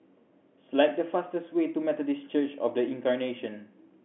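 No technical faults can be heard in the speech, which carries the narrow band of ordinary G.711 telephone coding, from about 200 Hz to 3.4 kHz, with at most a faint quantisation hiss that rises and falls with the signal level.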